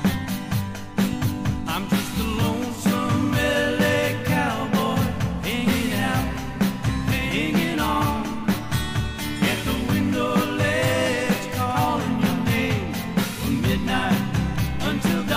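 At 1.13 to 1.15 s, a single loud pop cuts in. It is a sharp, brief thump, peaking a few decibels above the sound, which continues underneath. The likely cause is a sudden voltage pulse, from a plug, switch, static or driver glitch.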